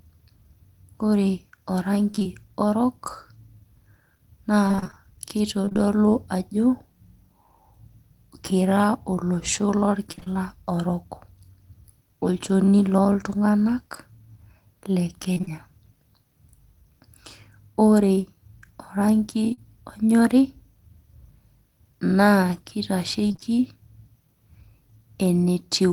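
From 2.11 to 2.28 s the speech turns choppy and robotic. This is repeated packet loss. Holes of about 20 ms keep arriving, and each is patched by extending the last sound. Nearly half of that stretch is concealed, which fits lost 20 ms packets. The same burst returns from 4.68 to 4.98 s, with twice as many gaps.

From 5.05 to 5.79 s a jitter buffer slow-down follows. The receiver stretches the audio by repeating short pieces to rebuild its reserve. That adds 36 ms and plays at 96% speed, so sounds drag slightly at an unchanged pitch.

Inside that stretch, from 5.62 to 5.77 s, the robotic chop returns. It recurs at 10.12–10.28 s and 15.34–15.52 s.

At 19.53 to 19.59 s there is a short concealed packet loss. About 40 ms never arrived in time, and the receiver filled it by continuing the previous sound. It is heard as a brief smear or wobble.

The last robotic burst runs from 23.27 to 23.44 s, where half the span is patched.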